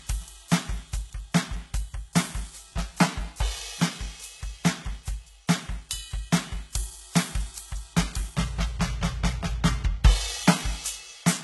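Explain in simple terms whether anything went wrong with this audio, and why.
Throughout the whole music clip, nothing is heard above 11.8 kHz, so the brightest, airiest sounds are dull. This is likely low-bitrate audio saved at a high bitrate. Unlike a plain poor encode, the file is large, but re-saving couldn't restore what was lost.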